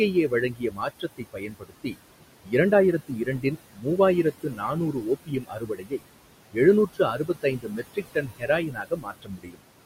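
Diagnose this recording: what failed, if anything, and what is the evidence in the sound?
The failure sits in call processing, in the noise suppressor. Noise suppressor artifacts run through the whole clip. The room noise sits about 13 dB below the speech. Between phrases the suppressor pulls it down by about 21 dB. Under the speech it lets it back up. So the background pumps with the talking. The suppressor decides band by band and frame by frame.

Speech cut by the noise suppressor shows in three stretches: 0.13 to 1.97 s, 2.44 to 6.05 s, and 6.52 to 9.62 s. Parts of the speech drop by about 21 dB, and by about 22 dB in the last stretch. Roughly a second is lost in the first span. About one and a half seconds is lost in each of the others. Soft sounds fall near the noise estimate, so the suppressor treats them as noise. They come out swallowed and faint.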